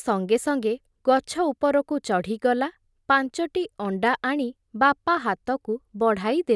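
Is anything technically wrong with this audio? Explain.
No, nothing technically wrong turns up in this recording; it all comes through just fine.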